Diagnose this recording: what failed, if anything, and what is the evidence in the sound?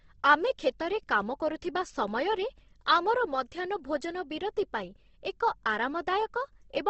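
The codec stage failed here. The whole clip sounds rough and grainy, with a noisy texture and nothing above 8.2 kHz. That's likely Opus compression in its music mode, starved at a rate that fits about 16 kbps, so it fills bands with noise.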